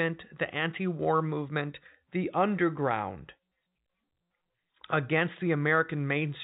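Nothing stood out on listening to this speech clip, which comes through with the narrow band of ordinary G.711 telephone coding.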